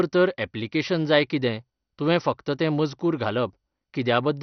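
From start to finish the speech sounds dull and gurgling, with nothing above 6.1 kHz and a grainy, bubbling roughness. The likely cause is heavy MP2 compression at a low rate, around 48 kbps. Starved of bits, the codec shuts off its upper sub-bands and quantises the rest coarsely. A plain low-pass filter would dull the sound without that granular churn, and the flickering bands give a coarser texture than MP3's swirling artefacts.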